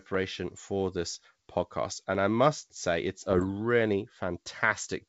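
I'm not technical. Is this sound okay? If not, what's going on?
No. There are bit errors on an ADPCM link from about 3.30 to 3.45 s, heard as a short stretch of pops and roughness with the level briefly jumping. The call travels as a compact digital code, and a small share of its bits were flipped in transit. Each wrong bit also throws off the decoder's running guess about the sound and how large its next step should be, so the damage lingers for a few milliseconds before it recovers.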